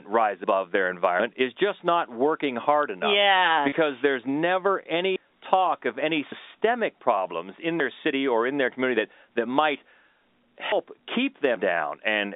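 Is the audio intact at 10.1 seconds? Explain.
Yes, the speech at 10.1 seconds is intact, carried through the G.711 telephone coding with its usual narrow line band of about 250 Hz to 3.7 kHz and no fault at that moment.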